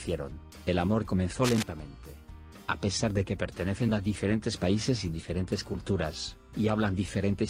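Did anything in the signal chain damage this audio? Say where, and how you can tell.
Yes. The damage sits in the analogue wiring. From 1.43 to 1.63 s, a burst of cable scratch noise rides over the sound for about 0.2 s. It is dense and uneven, heard as scratching and rustling, and it comes in only a little below the sound itself. The likely cause is a worn cable or connector being moved. Its contact resistance jumps about rapidly, and those jumps turn into bursts of noise.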